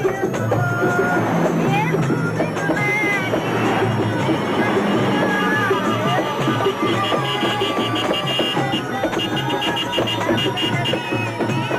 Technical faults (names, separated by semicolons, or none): switching supply whistle